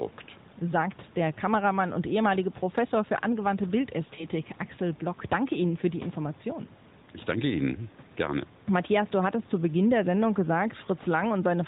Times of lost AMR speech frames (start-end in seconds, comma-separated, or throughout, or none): 4.16-4.26